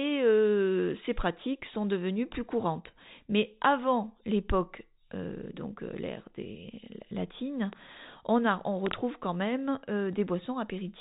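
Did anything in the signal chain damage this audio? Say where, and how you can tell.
Yes. Loud pops at 7.73–7.75 s, after "euh l'ère des latines", and a double pop at 8.87–8.93 s, before "quand même", peak roughly 10 dB and 20 dB above the speech, which continues underneath. Sharp voltage steps, likely from static or a loose plug in the analogue wiring, were added to the signal.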